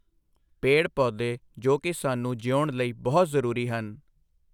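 No technical faults are audible.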